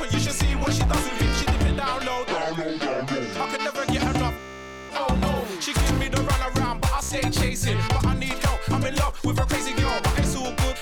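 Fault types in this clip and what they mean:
Bluetooth stutter: packets on the wireless link arrived late or not at all, so the receiver kept replaying its last short buffer until fresh data got through. From 4.39 to 4.92 s the repeated slices run together into a machine-gun buzz. A shorter burst follows from 7.03 to 7.15 s. After each, the sound resumes further along, with 0.50 s and 0.08 s of material skipped, as though playback had continued unheard.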